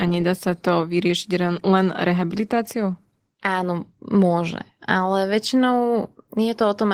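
From start to finish the speech carries Opus voice compression, plainly audible throughout. The coder appears to be running in its hybrid mode, with linear prediction handling the band below 8 kHz and a transform layer above it. The sound fits roughly 16 kbps with 20 ms frames. The excitation is coded coarsely, leaving the voice hoarse and faintly robotic. The upper band is still present.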